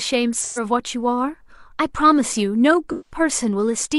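At 0.41 to 0.63 s and again at 2.92 to 3.19 s, the speech turns briefly smeared and noisy, a symptom of AAC frame loss with concealment. Each time about 128 ms of coded audio went missing, which fits three lost frames. The decoder bridged each hole by reusing the last intact spectrum with scrambled signs or interpolated energy, so the speech loses its sharp detail and takes on a hazy, phasey texture until good frames resume.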